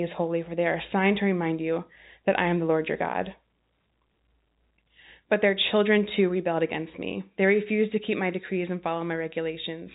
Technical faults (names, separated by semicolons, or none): none